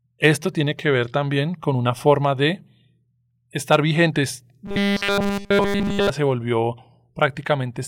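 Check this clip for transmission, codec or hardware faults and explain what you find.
One fault is present. From 4.66 to 6.10 s, between "estar vigentes" and "se volvió", there is robotic sound from repeated short buffers. Audio likely arrived too seldom, so a 5 ms chunk loops throughout, forcing a metallic 200 Hz buzz. A spectrogram shows flat harmonics spaced 200 Hz apart, and the waveform repeats every 5 ms.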